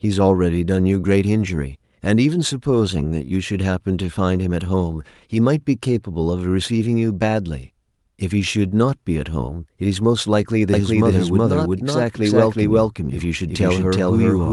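It's a speech recording, and at 10.74 s a doubled audio track kicks in and runs to the end. A second, equally loud copy trails the original by around 400 ms, appearing abruptly with no room tail, likely a slower capture path grabbing the same signal, all heard through a call-codec path that tops out near 12 kHz.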